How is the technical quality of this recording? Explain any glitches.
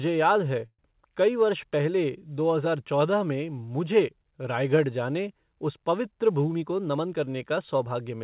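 Two timing glitches stand out in this speech recording. The band stops at 4 kHz, which fits a narrowband call codec such as G.711.

Call audio freeze, 0.66 to 0.81 s: packets were likely delayed and the jitter buffer ran empty. The receiver stretched the last sound into a fading buzz or hiss, then 50 ms of silence. Speech resumes 125 ms late with nothing lost.

Jitter buffer speed-up, 6.52 to 7.96 s: to cut excess buffered delay, the receiver removed repeated pitch-period slices totalling roughly 150 ms. Speech runs at 108% speed, same pitch, sounding hurried.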